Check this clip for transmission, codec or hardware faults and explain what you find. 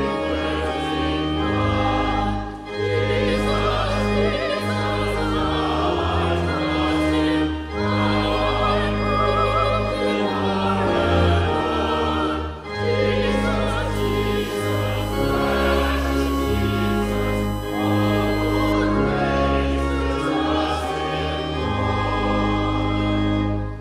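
There is one hardware fault, USB whine, from 13.95 to 18.73 s. Current drawn by the USB bus in 1 ms frames leaks into the audio through power or ground, adding a fixed-pitch whine on a 1 kHz fundamental, strongest at its 3 kHz harmonic, roughly 20 dB below the sound.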